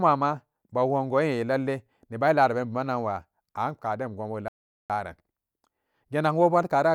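A speech recording with one clear problem: a playback stall at 4.48 s, where the audio just drops to silence mid-flow for about 0.41 s before carrying on at 4.90 s. That gap is long enough to hear as a hiccup rather than a natural pause. The likely cause is the player running dry on its buffer or having its audio thread held up, so nothing got written to the output until it caught up again.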